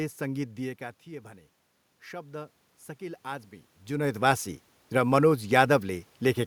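From 2.1 to 5.24 s the input level drops by about 11 dB and the automatic gain control responds by raising its gain about 8 dB, a case of automatic gain rising. The speech and the room noise behind it swell together gradually across those three seconds.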